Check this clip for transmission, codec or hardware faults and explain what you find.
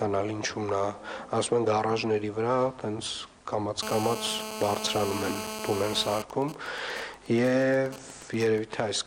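There's mobile phone interference in two stretches, one right after the other, both from a nearby 2G handset.

From 3.83 to 6.22 s there's GSM phone buzz: the phone is on a call, transmitting bursts about 217 times a second, and the audio circuitry rectifies those radio pulses. You get a steady, harsh, raspy 217 Hz buzz full of harmonics, about 7 dB below the signal and unrelated to it.

Then from 6.3 to 8.59 s it turns into GSM signalling bursts. The call is still up, but with the talker silent the phone only sends short groups of bursts, which get rectified the same way. It comes through as even ticks with a longer 217 Hz buzz twice a second, quieter, roughly 15 dB down.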